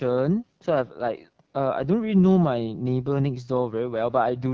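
From start to finish the speech sounds rough and raspy, with a buzzy, grainy edge and a thin, hissy top end. This is AMR wideband (HD Voice) codec damage: the pulse-driven vocal tract model is starved of bits, which points to one of its lowest rates, near 8.85 kbit/s, and the band above 6.4 kHz is filled with shaped noise.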